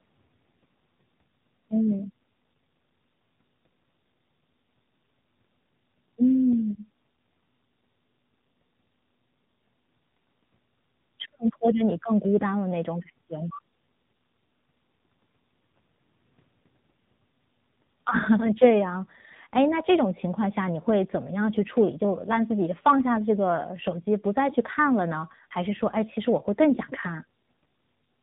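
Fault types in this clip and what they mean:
Tandem speech coding: the speech has passed through two speech coders in a row, each re-encoding the already degraded output of the one before, so their artefacts stack. The result is speech that sounds rougher, duller and more warbly than a single coding pass would leave it, with nothing above about 3.8 kHz. The character fits a CVSD stage followed, via G.711 A-law, by AMR-NB at 7.4 kbit/s, throughout the clip.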